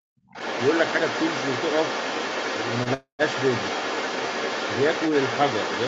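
From 0.00 to 0.11 s the speech drops sharply, by something like 40 dB, likely speech suppressed in double talk as the echo canceller ducked both sides.

From 0.29 s to the end, other side's voice leaking through sits only slightly below the speech, likely residual loudspeaker echo the canceller failed to remove.

At 2.83 to 2.89 s, a short stall from a late packet holds the sound for 24 ms with a slight buzz or dip before continuing, nothing lost.

From 2.94 to 3.22 s a call audio freeze, likely from packets held up in transit, inserts a 251 ms gap: a fading buzz or hiss, then 120 ms of silence, before the audio resumes where it stopped.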